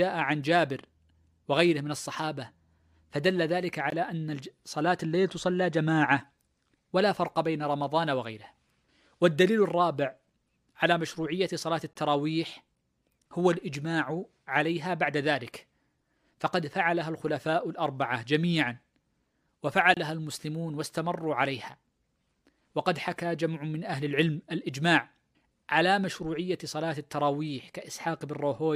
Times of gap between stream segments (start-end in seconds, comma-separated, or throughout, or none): 3.90, 11.93-11.95, 19.94-19.97